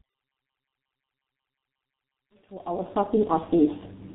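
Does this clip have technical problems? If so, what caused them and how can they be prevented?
Yes. The speech has tandem speech coding throughout. It passed through two speech coders in a row: a 64 kbit/s CVSD link, then G.711 A-law, then G.723.1 at 6.3 kbit/s. Each re-encoding worked on the previous coder's damage, so the result sounds rougher and more warbly than a single G.723.1 pass would. A single pass would be band-limited but cleaner. Nothing remains above 3.9 kHz. To prevent it, keep the call in one codec end to end, or use transcoder-free operation at network borders.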